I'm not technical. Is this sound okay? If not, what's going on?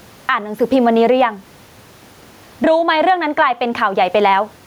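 No. There is gain pumping all the way through this speech. Loud and quiet parts sound squashed together. The likely cause is a recording level set far too high, with automatic leveling pulling it down hard. There is also faint room noise in the background, which is normal.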